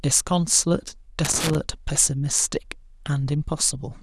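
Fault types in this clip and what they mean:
Loose connector crackle: from 1.25 to 1.55 s the speech breaks into an irregular burst of scratchy crackle. A worn or dirty contact in the signal path is making and losing connection as it shifts, chopping the audio.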